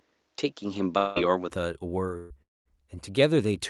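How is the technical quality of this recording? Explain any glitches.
The recording has three kinds of fault, all in short stretches.

From 0.0 to 1.5 s the sound is dull, with nothing above 7.6 kHz. It then brightens without any gap, and the level shifts by a few dB. The likely cause is an input switched to a poorer device, whose narrower band and different level give way to the better one.

A long network dropout likely occurs at 0.97 to 1.18 s. The last sound is stretched and fades out for about 180 ms, and about 180 ms of audio is missing. A second one runs from 2.42 to 2.68 s. It is likely the same cause. The fill fades to near silence for about 220 ms before the sound resumes further on.

A burst of packet loss hits at 2.17 to 2.33 s. About 120 ms of audio never arrived. The receiver held the last sound for about 127 ms and turned it down, so it briefly fades. The sound then jumps ahead past the gap.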